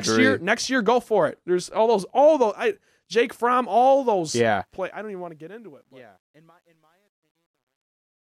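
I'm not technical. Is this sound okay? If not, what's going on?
No. There is truncation distortion on a fade, from 4.52 s to the end at 8.34 s. The speech fades out from about 4.5 s, but the volume control is working with too little detail, behaving like an 11-bit stage. As the sound gets quieter, smooth waves turn into blocky steps. From 5.93 s onward it is at its worst: the tail sounds gritty.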